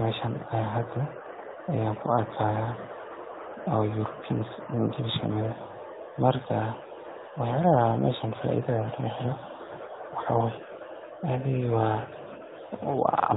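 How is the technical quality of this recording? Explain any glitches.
The quality is limited, with plainly audible AMR narrowband mobile codec damage throughout. The speech sits at 8 kHz sampling, so nothing above 4 kHz passes. A vocal-tract model driven by sparse pulses leaves a buzzy, synthetic edge, which fits a mid-rate setting around 10.2 kbps.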